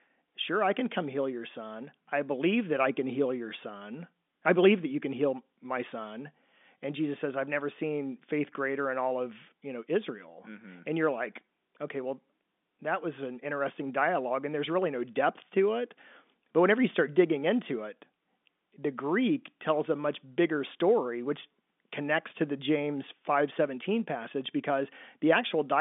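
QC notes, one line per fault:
No faults found.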